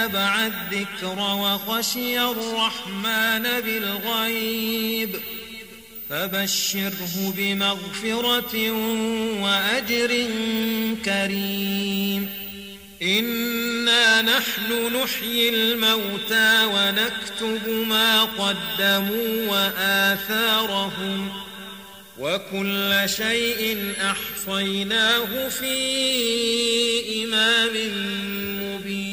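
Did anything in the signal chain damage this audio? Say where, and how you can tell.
Yes. A switching supply whistle runs throughout the recording, entering at the analogue stage through the power or wiring. A high tone sits roughly around 15 kHz, wandering between about 10.7 kHz and 17.5 kHz, and it is strong, roughly 10 dB below the wanted signal. The whistle's drifting pitch is the signature of a switching regulator whose frequency shifts with load or beats against another supply, leaking into the audio path.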